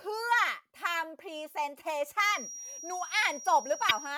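From 2.23 s to the end of the clip, a thin, steady tone at 5.7 kHz sits behind the speech, roughly 15 dB below it, swelling and fading slowly in level but never growing into a howl. This is a feedback whistle, likely caused by a loudspeaker-to-microphone loop held just at the edge of feedback. On a spectrogram it appears as a single bright horizontal line at 5.7 kHz, unbroken across every gap in the speech. The waveform barely shows it.

At 3.88 to 3.91 s, a short disturbance of about 30 ms cuts across the speech and the sound seems to skip ahead. This is a broken MP3 bit reservoir. Frames appear to have been lost, so the next frame looked back for borrowed data and decoded bytes belonging to another frame. The length fits one MP3 frame of about 26 ms. In the waveform the speech envelope jumps abruptly at that point.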